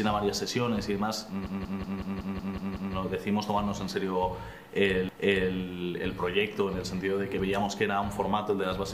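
A run of compressed frames was written or sent more than once, so the decoder replays a short block of audio. From 1.47 to 2.95 s, a 185.8 ms block, about two frames' worth, plays eight extra times as a rapid stutter, adding 1.49 s. From 5.09 to 5.55 s, a longer 464.4 ms block, which fits five frames, repeats once, so a chunk of audio is heard twice in a row. These repeated frames stretch the audio by the replayed time.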